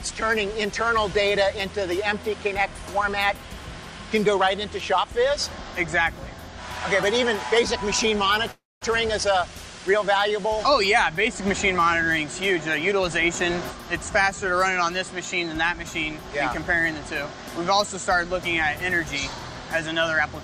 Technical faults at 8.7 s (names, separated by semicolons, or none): call audio freeze